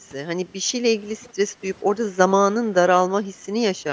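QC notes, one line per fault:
1.23–1.27 s, echo leak: a brief, faint ghost of the speech surfaces, sitting far below the main signal and sounding like a delayed reflection rather than part of the talk. It trails the original by about 435 ms, which is too late to read as room reverberation. This is likely a far-end loudspeaker feeding its own microphone, with the echo canceller failing to strip out this short scrap before it was sent back down the call.
1.48–1.61 s, background gated by the echo canceller: the room tone beneath the speech sags audibly, by about 9 dB at its deepest, for roughly 150 ms, then recovers. The ambience briefly thins out and comes back rather than changing naturally. While the loudspeaker side was active, the echo canceller clamped the microphone gain to suppress possible echo. The background returned once the canceller released that suppression.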